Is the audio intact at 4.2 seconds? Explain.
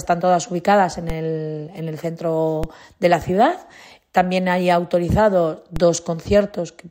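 Yes, at 4.2 seconds the audio is intact, with no dropout, click, distortion or other fault audible at that moment.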